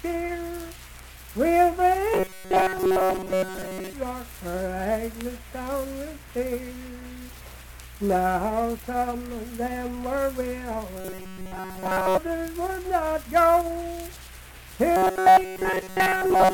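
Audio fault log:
2.14–3.93 s, 11.01–12.18 s, 14.97–16.53 s: robotic sound from repeated short buffers. Audio likely arrived too seldom, so roughly 5 ms chunks looped over most of the sound, forcing a rigid, metallic 188 Hz buzz.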